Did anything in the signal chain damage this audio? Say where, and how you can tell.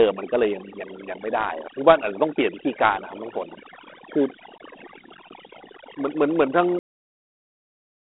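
Yes. Overdone noise removal during call processing runs through the whole speech clip: the background collapses to near silence with twinkling specks, and quiet voice detail is pulled down with it. Plain broadband noise would add hiss rather than remove detail.

Dialogic VOX ADPCM, a codec-stage fault, also runs throughout. Gritty hiss follows the speech, the band sits at a phone-line range of roughly 250 Hz to 3.5 kHz, and nothing is present above 3.9 kHz. The 4-bit ADPCM steps fit 32 kbps. A simple lowpass filter would sound clean, not gritty.

A cut-off end, from the buffer or storage stage, hits at 6.79 s: the speech stops mid-sound and drops straight to digital silence through 8 s, with no decay. The final buffers were never written. A fade or a gate would leave a tail, and this has none.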